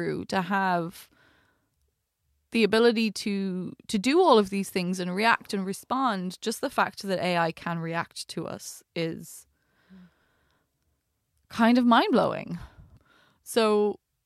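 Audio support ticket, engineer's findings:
No faults found on this speech recording; the signal path shows no audible technical defects at any point.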